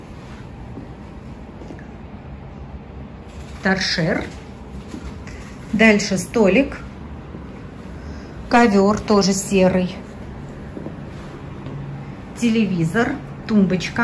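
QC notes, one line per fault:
Nothing stood out on listening.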